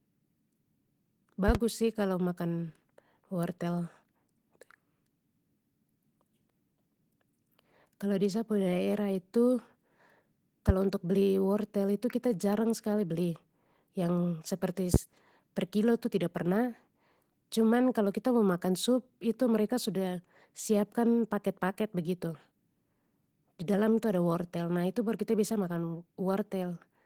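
The whole recording carries Opus voice compression, and the damage is easy to hear. The speech has that slightly muffled, hoarse, faintly robotic quality of a low-rate Opus hybrid stream, with SILK's linear-prediction coder handling the lower band and a thin CELT layer filling in the top of a fullband signal. The coarse excitation coding sounds like roughly 16 kbps in 20 ms frames, which is nowhere near enough to keep the voice clean.

At 1.48 to 1.58 s there's a loud pop, actually two sharp clicks in quick succession. Another single pop lands at 14.94 to 14.97 s. Both jump out at around 20 dB over the speech while the talking carries straight on underneath. They're most likely voltage transients, the kind you get from a connector being knocked, a switch, static, or a driver glitch, which the downstream circuitry then shapes into a short thump.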